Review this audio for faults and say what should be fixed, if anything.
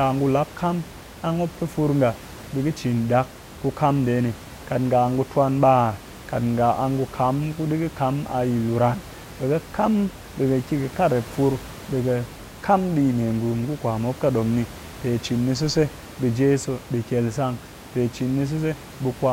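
Nothing in this audio needs to be fixed.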